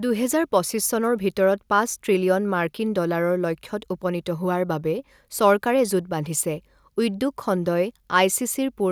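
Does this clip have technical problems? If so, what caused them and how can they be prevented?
No, nothing stood out as a technical problem on listening, so there is nothing here that needs a cause or a fix.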